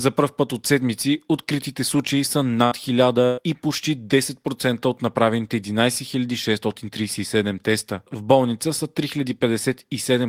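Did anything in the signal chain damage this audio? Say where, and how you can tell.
Yes, at the network stage: two bursts of packet loss, at 2.65 to 2.74 s, right after "седмици откритите случаи са", and at 3.25 to 3.40 s, just before "и почти". The receiver filled about 60 ms and then 120 ms by extending the last sound and fading it out, and playback resumed further on with the audio in between gone. A spectrogram shows frozen, flat bands dimming out, ending in an abrupt vertical seam.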